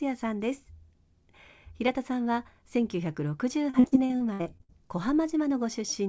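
From 3.70 to 4.71 s, repeated packet loss (robotic sound) leaves short gaps, up to 61 ms, patched with repeated fragments. About a third of the stretch sounds choppy. The spectrogram shows smeared, cloned harmonic blocks, and the waveform looks chopped, with energy ending at 8 kHz throughout from the G.722 call codec.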